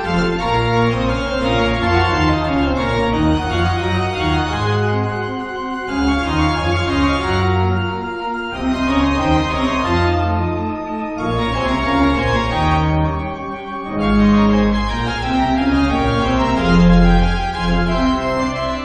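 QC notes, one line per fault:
No faults heard; nothing to log.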